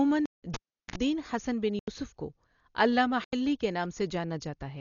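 Dull, band-limited speech with nothing above 7 kHz and a rough, fluttering noise clinging to tonal parts is likely the result of heavy Dolby Digital compression, consistent with a bitrate around 40 kbps, where the encoder narrows the band and leaves many frequency lines to be filled with dither noise. The sound also drops abruptly to dead silence from 0.26 to 0.43 s (about 171 ms), and again from 1.79 to 1.88 s and 3.24 to 3.33 s (about 85 ms each). These are blocks of digital silence, most likely where the output buffer went unfilled and was replaced by zeros; the lengths fit buffers of 8192 and 4096 samples. Between 0.54 and 0.96 s there is a pop, roughly 370 ms of near silence, a 50 ms burst of 60 Hz mains buzz, then another pop as the audio returns, the signature of a live cable pulled and plugged in, with the buzz coming from only the tip making contact.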